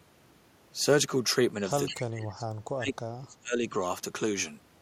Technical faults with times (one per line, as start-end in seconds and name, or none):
1.86-2.02 echo leak
1.90-3.74 speech suppressed in double talk